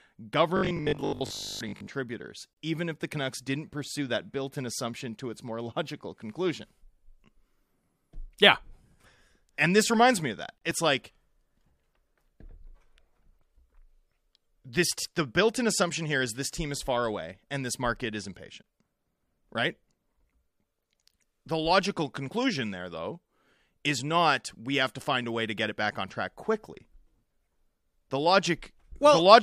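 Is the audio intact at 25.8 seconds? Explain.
Yes, at 25.8 seconds the speech plays through intact, with no dropout, click, distortion or other fault at that moment.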